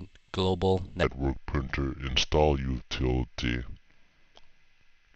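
From 1.03 s through to the end, there's a section at the wrong speed: the sound suddenly runs at about 0.77 times normal, so everything drags and drops roughly five semitones in pitch. That's likely playback or an edit locked to the wrong clock rate.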